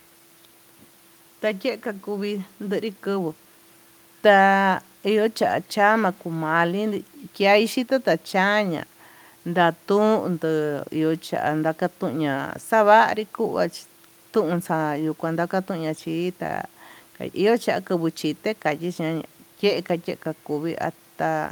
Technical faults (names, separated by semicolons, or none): none